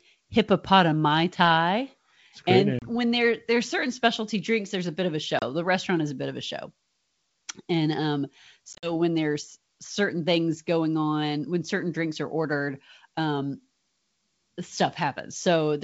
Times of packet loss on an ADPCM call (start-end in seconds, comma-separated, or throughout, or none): 2.79-2.87, 5.39-5.44, 8.73-8.93